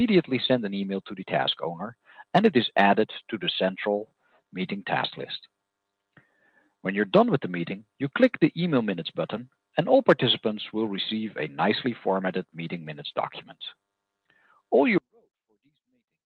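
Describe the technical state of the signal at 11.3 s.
At 11.3 s the signal is intact, with no dropout, glitch or distortion, just the steady band-limited character of an Opus call path running normally at 32 kbps with its top end near 12 kHz.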